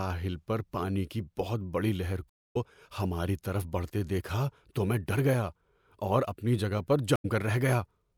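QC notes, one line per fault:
2.29–2.56 s and 7.16–7.25 s, stream reconnect: the connection dropped and a fresh decoder restarted mid-stream. After "کی بہت بڑی لہر" there is 255 ms of silence and the sound resumes roughly 150 ms later, at "ہماری طرف بڑھتے دیکھا". After "اپنی جگہ پر" there is 80 ms of silence and a skip of about 70 ms. Both show as full-band blank gaps on the spectrogram, with an abrupt cut and a brief fade-in on the waveform.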